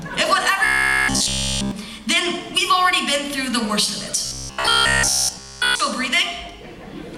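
From 0.65 to 1.71 s and again from 4.25 to 5.80 s, the sound turns to a rigid, robotic buzz fixed at 66.8 Hz. This is likely repeated short buffers: a roughly 15 ms slice is replayed while new audio is skipped. Unlike codec warble, the pitch never drifts.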